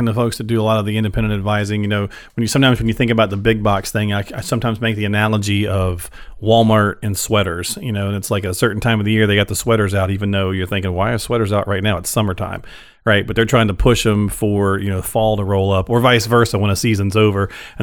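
No technical faults are audible anywhere in the speech recording.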